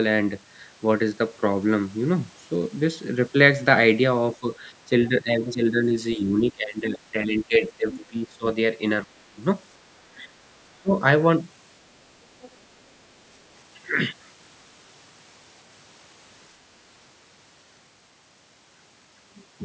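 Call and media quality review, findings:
Speech suppressed in double talk, 4.4–8.45 s, 9.05–9.38 s and 10.03–10.91 s. The near voice dips and cuts out in pieces, around 15 dB down, deepest around 25 dB at 9.05 s. Likely the echo canceller ducking both talkers during overlap.

Other side's voice leaking through, 6.12–6.16 s, 7.43–7.98 s, 10.17–10.22 s and 12.41–12.56 s. These are faint scraps of a second voice, about 15 to 40 dB under the talker and loudest at 7.43 s. Likely residual loudspeaker echo the canceller missed.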